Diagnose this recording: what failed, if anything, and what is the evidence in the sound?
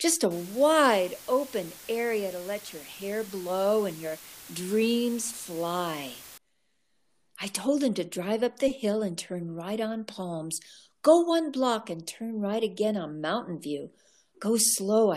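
Low bit depth with dither, from 0.31 s to 6.38 s, points to a sample-format conversion fault. The speech is reduced to 7 bits with dither added before rounding, so the error becomes a constant, even hiss, roughly 20 dB below the speech, without distortion.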